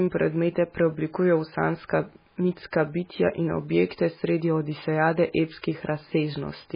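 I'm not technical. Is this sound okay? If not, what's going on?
No, the speech sounds watery and dull from start to finish, with nothing above 5 kHz, likely from heavy MP3 compression that squeezed the file too hard.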